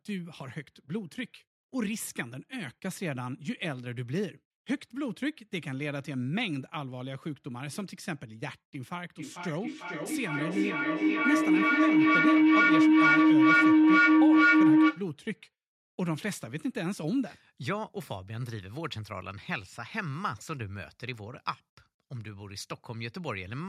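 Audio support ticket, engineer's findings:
Feedback howl, 9.01–15.1 s. Tone around 300 Hz, about 12 dB over speech, pulsing roughly every 0.4 s. Shared-room mic-speaker loop gaining each pass.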